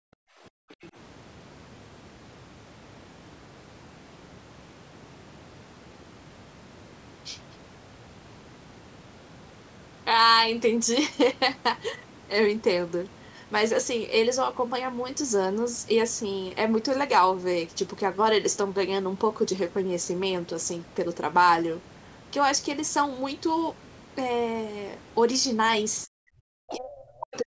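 From the very start to 0.77 s the room sound sits far below where it should be, sinking by about 40 dB for most of that opening stretch before it comes back up. That is background gated by the echo canceller. While the loudspeaker was playing, the canceller clamped the microphone down hard. It let go only once the far end went quiet, so the ambience simply vanishes for those first moments.

Just after, from 0.82 to 0.90 s, a faint second voice surfaces, roughly 25 dB below the main speech. This is the other side's voice leaking through, likely residual loudspeaker sound that the canceller failed to subtract from the microphone signal. The same thing returns at 26.68 to 26.76 s as a short scrap, louder this time at around 15 dB under the talker.

Near the end the talker's own speech is cut. At 26.05 to 26.12 s it dips sharply, by something like 40 dB, for a fraction of a second. From 26.7 s to the end of the clip it is pushed down just as deeply while that far-end scrap plays over it. 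This is speech suppressed in double talk, likely because the canceller could not tell the talker's voice from the loudspeaker echo and turned both down together. The band-limited character of the whole recording, with nothing above 8 kHz, comes from ordinary call microphone processing.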